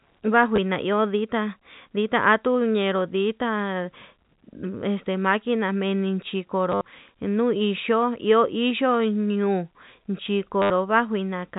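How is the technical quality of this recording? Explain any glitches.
The telephone-band speech has three brief packet-loss glitches, heard against the 4 kHz ceiling and faint level-following hiss of G.711 coding.

Packet loss with last packet repeated occurs at 0.56 s (20 ms), 6.72 to 6.86 s (90 ms lost across 140 ms, longest run 70 ms) and 10.62 to 10.70 s (80 ms). The receiver replays the previous packet, so runs buzz near 100 Hz, which fits 10 ms packets. The result is a robotic stutter, not the silent gap of zero-filled loss.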